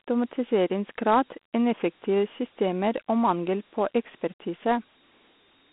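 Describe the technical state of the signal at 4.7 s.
At 4.7 s the speech carries Dialogic VOX ADPCM coding, present across the whole clip. The codec stores each sample as a 4-bit step from a running prediction, and the sound fits a 32 kbps stream, 4 bits at 8,000 samples a second. The quantisation error is plainly audible as a gritty hiss that tracks the speech. The band runs from about 200 Hz to 3.5 kHz, with nothing above 3.9 kHz.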